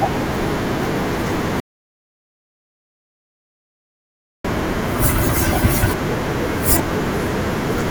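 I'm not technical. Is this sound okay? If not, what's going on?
No. The incoming audio was likely lost for a moment, perhaps from a loose connection or an accidental mute, while the recording kept running. This audio dropout to silence cuts the speech off at 1.60 s, leaves about 2.8 seconds of dead silence, and returns at 4.44 s.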